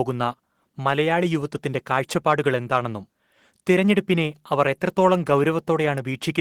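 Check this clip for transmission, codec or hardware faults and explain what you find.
One codec fault runs through the whole clip. Opus voice compression is plainly audible from start to finish. Coarsely coded excitation leaves the speech hoarse and slightly robotic, which fits a low rate near 16 kbps.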